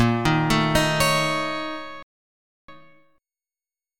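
The player most likely ran short of buffered data, or its playback thread was held up, and this produces a playback stall from 2.03 to 2.68 s. The audio cuts out in mid-flow and the output stays silent for about 0.66 s before sound returns. Because the sound doesn't simply jump ahead, the player has to deal with the material that piled up during the gap. It does this with time-compressed catch-up from 2.68 to 3.32 s, shortening the backlog by dropping small slices of the signal and cross-fading across each cut. The result is running at twice normal speed, so that stretch sounds rushed and crowded, yet its pitch stays where it was. Normal pace resumes at 3.32 s.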